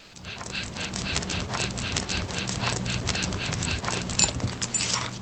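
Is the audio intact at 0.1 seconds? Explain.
No. From 0.00 to 0.13 s the real background, which sits about 19 dB below the loud parts, gives way to comfort noise in place of the background. This is likely discontinuous transmission of the kind Opus DTX performs: the sender stops sending during the lull, and the receiver fills the gap with synthetic noise about 4 dB quieter. Unlike a dropout, the gap isn't silent; it holds a steady, featureless hiss without the background's texture.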